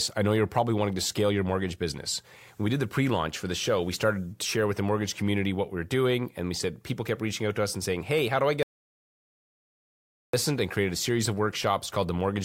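At 8.63 s, just after "how do I get", the speech cuts to complete silence with no room tone, resuming at 10.33 s on "and created a series". This audio dropout to silence, about 1.7 s long, likely came from a lost or muted input while silence was still recorded.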